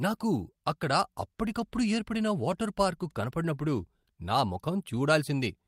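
At 4.65 s, right after "వాటర్ పార్కు కనబడినప్పుడు నా", there is a lost packet rebuilt from error correction. The speech carries on without a gap, but for about 20 ms the sound turns rougher and noisier. That fits a single dropped packet. The decoder filled the hole with the low-bitrate redundant copy carried in the following packet, so the texture degrades briefly while continuity holds.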